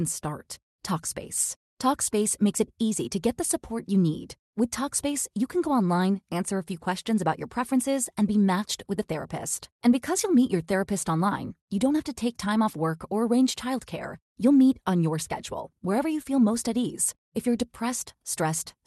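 Right from the start you can hear clock drift between sender and receiver: the far end's clock runs fast, by around 4 percent, so the jitter buffer keeps overfilling and the receiver has to throw material away to keep up. That produces the repeated timing corrections running from 0.01 s to 18.77 s, all trimming in the same direction at a 104 percent speed ratio. They land at uneven intervals and come across as faint little skips, with the tempo never quite settling. All of this rides over an Opus-style call path, with the top end stopping around 12 kHz and a coding texture that fits roughly 48 kbps.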